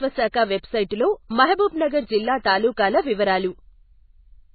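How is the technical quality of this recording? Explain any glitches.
The quality is poor, with heavy damage throughout the speech. From start to end, nothing reaches above 4.5 kHz, and the sound is watery and swirly, with smeared consonants. The likely cause is MP3 compression at a very low rate, which fits about 18 kbps. Short of bits, the encoder cuts the treble and drops weak frequency lines. A spectrogram shows a hard ceiling and flickering holes.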